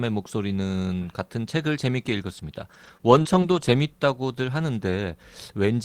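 Between 2.37 and 3.70 s the speech has scattered short gaps. About three packets went missing or arrived late, each no longer than about 20 ms. The receiver filled each hole by extending the preceding sound. Brief ticks and small smears result.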